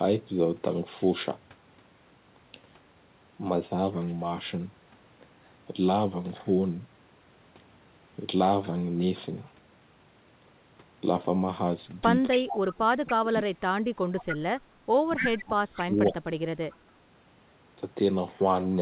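Speech over a narrowband call, with nothing above 4 kHz, which fits a G.711 mu-law path. The main problem is echo leak: a delayed copy of the voice, trailing by 282 ms, comes back at 12.31–12.74, 13.08–13.13, 14.19–14.35, 15.16–15.28, 16.07–16.16 and 16.71–16.76 s. It comes back in short scraps. It's strongest around 15.2 s, only about 5 dB under the speech, and barely there by 16.7 s. That's likely a far-end speakerphone whose echo canceller let some of its own loudspeaker output through and sent it back. Tangled up with that is speech suppressed in double talk. From 12.39 to 13.77 s and again from 15.16 to 16.25 s the voice ducks in pieces, dropping as much as roughly 30 dB at its deepest, for about a second and a half and then about a second. Both stretches line up with the echo bursts, so the canceller most likely couldn't tell the talker from the echo and pulled everything down together.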